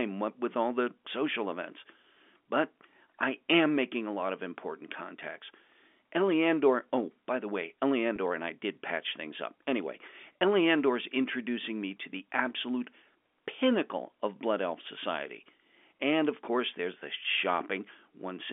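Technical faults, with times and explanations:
8.16 s and 10.40 s, packet loss with pitch repetition: two brief held, buzzy moments, the first between "oh by the way" and "and I did patch". About 10 ms and 20 ms of audio went missing, and the receiver filled each gap by repeating the last pitch period, over a band-limited telephone line.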